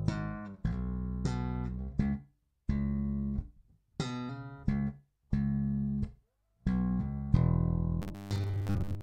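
The audio ends with robotic sound from repeated short buffers, running from 8.02 s to the end at 9.02 s. Over that last second the sound turns into a rigid, metallic buzz at 100 Hz that only loosely tracks the original material. The likely cause is new audio arriving too seldom, so playback fills the gaps by repeating a roughly 10 ms slice. That repetition makes up most of the section, while the real audio in between is skipped.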